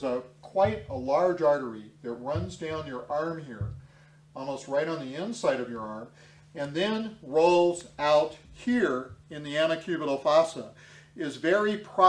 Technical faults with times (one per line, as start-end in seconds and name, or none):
none